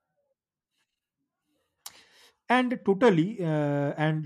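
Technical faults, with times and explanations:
No technical faults can be heard anywhere in the speech signal.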